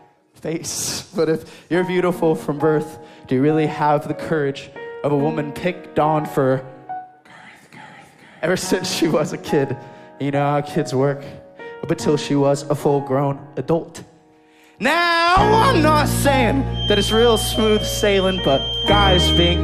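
From 16.69 s to the end at 19.64 s, a feedback whistle appears: a thin, steady 3.2 kHz tone sitting a little below the sound and swelling and fading slowly in level. Unlike runaway howl, it never builds. The likely cause is a speaker-to-microphone loop held just at the edge of feedback.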